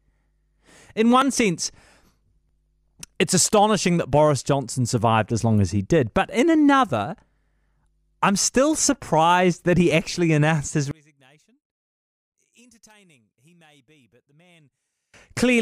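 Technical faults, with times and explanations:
1.22, 2.49, 4.88 and 9.91 s: dropped buffer (overrun). Each is a small forward jump in the speech, losing roughly 5 ms, or roughly 15 ms at 4.88 s. This is likely from samples being overwritten before they were read.
10.91–15.14 s: one channel inverted. Summed to mono, the centred speech drops by about 36 dB to a faint residue, likely from reversed polarity on one channel cancelling the shared content.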